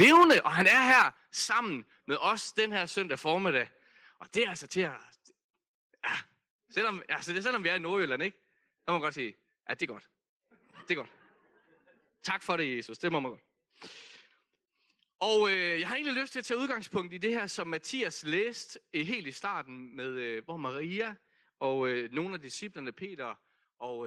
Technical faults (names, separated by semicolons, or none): microphone overload; microphone volume stepped down